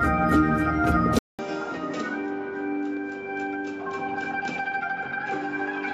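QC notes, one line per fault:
1.19–5.94 s, input switched to a poorer device: a 200 ms silence, then duller sound about 10 dB quieter with a faint new noise floor, likely from another microphone taking over. Spectrogram: an empty gap, then nothing above 7.6 kHz. Waveform: a flat gap, then a smaller envelope.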